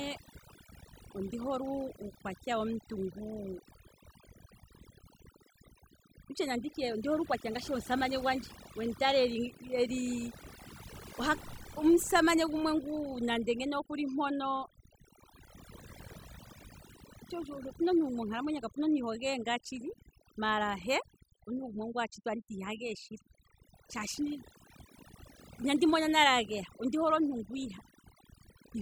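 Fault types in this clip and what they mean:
Overdone noise removal: heavy noise reduction throughout this speech guts bands near the noise estimate, leaving near-silent gaps with twinkling specks; the spectrogram shows scattered isolated blobs.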